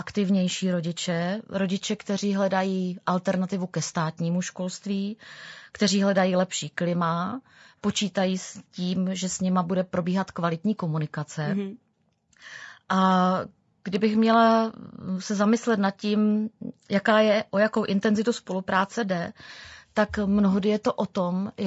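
From start to finish the speech sounds rough and grainy, with a hiss-like noise filling the gaps between pitch harmonics and a synthetic edge to the upper register. The audio holds nothing above 8 kHz, in line with the call's microphone path. The likely cause is low-delay AAC compression of the AAC-ELD kind, whose very short frames blur harmonic detail, and the plainly audible damage fits a bitrate around 32 kbps.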